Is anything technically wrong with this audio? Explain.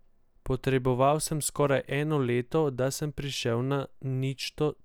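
No, I hear nothing technically wrong with this speech recording.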